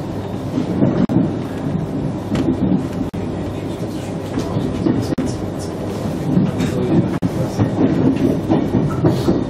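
At 1.05, 3.09, 5.14 and 7.18 s, a gap at a join of encoded pieces opens a gap of about 42 to 43 ms, recurring every 2 s. Separately encoded segments were butted together with their encoder delay and final-frame padding left untrimmed, so the sound drops out with smeared edges and then resumes where it stopped.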